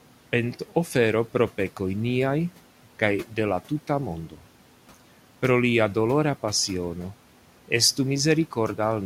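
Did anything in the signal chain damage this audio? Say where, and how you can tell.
Yes. The call-processing stage's noise suppressor misjudged a stretch of speech as noise and caused speech cut by the noise suppressor between 4.3 and 4.42 s. It pulled the level down by as much as about 10 dB for roughly a tenth of a second, so that part sounds swallowed and faint, even though the room noise sits about 22 dB below the speech.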